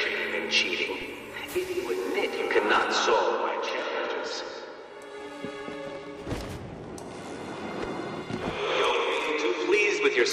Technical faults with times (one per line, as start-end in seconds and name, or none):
1.02 DC step